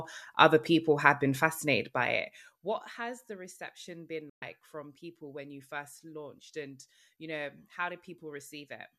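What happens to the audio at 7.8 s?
Nothing goes wrong at 7.8 s: the speech carries on intact through that moment, with no dropout, click or distortion.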